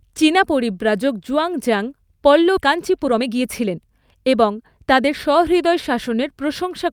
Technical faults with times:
2.57-2.59 skip ahead
2.67-5.88 jitter buffer speed-up

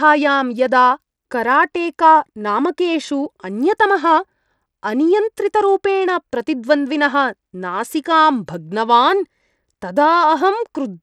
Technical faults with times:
0.00-11.03 Bluetooth SBC compression

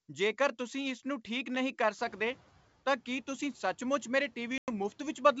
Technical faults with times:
1.98-2.46 noise suppressor catching up
4.58-4.68 packet loss on an ADPCM call

